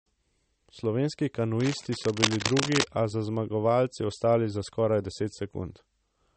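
It's a speech clip, and the whole thing carries plainly audible codec damage that sounds like MP3 compression. The top end stops dead at about 8.4 kHz, and the detail that's left has that watery, swirly quality you get when an encoder starves for bits and drops weaker frequency components frame by frame. The damage fits a low bitrate, something around 36 kbps. On top of that, from 1.60 to 2.85 s there's cable scratch noise: dense, uneven bursts of scratchy, rustling noise sitting only a little below the speech. That's likely a worn cable, connector or control being moved while carrying DC, so its contact resistance jumps around and dumps noise into the signal for that stretch.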